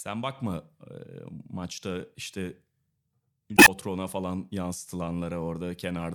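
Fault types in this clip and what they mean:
Damaged data in a compressed stream: a short stretch of the coded speech stream is corrupt, so the decoder misreads those frames, loses sync and has to search for the next valid frame header. Here it is heard as a brief glitch from about 3.54 to 3.68 s. On a spectrogram that 0.14 s patch shows as a break from the surrounding harmonics. In the waveform it appears as an abrupt discontinuity in the envelope.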